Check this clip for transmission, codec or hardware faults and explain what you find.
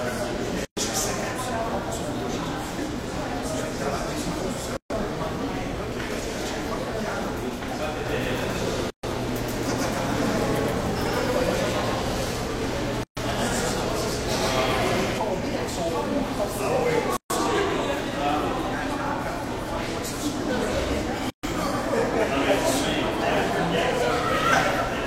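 Two faults are present: a recurring gap at a join of encoded pieces, and a doubled audio track in the middle section.

The gaps at joins of encoded pieces fall at 0.65, 4.77, 8.90, 13.03, 17.17 and 21.30 s, every 4 s. The first lasts about 120 ms and the rest about 133 ms. The audio was encoded in separate pieces and joined without trimming, so each piece's start-up silence and padded final frame stay in. Continuous sound drops to silence with smeared edges. Unlike a dropout, nothing is lost: the sound resumes exactly where it stopped, on a strict 4 s grid.

The doubled audio track runs from 8.06 to 15.18 s. A second full-band copy of the sound trails about 150 ms behind the original at roughly the same level. The likely cause is the same signal being captured again through a slower path, or an edit that holds two offset copies. It sounds like a flat, hard slapback. It is told apart from a room echo or reverb by the absence of decay or room colouring and by its abrupt start and stop.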